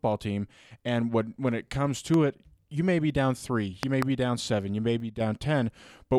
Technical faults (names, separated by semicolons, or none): loud pop; one channel drops out